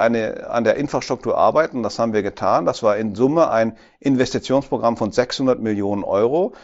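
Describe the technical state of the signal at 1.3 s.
At 1.3 s the speech comes through intact, with nothing wrong at that moment beyond the ordinary 8 kHz band limit of the Bluetooth mSBC headset link carrying it.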